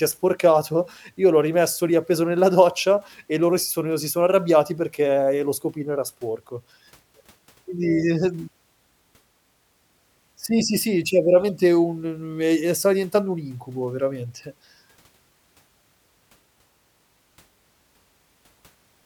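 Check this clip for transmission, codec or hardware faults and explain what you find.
No transmission, codec or hardware faults are audible anywhere in the recording; the speech signal arrives intact and continuous, with nothing in it pointing to trouble along the path.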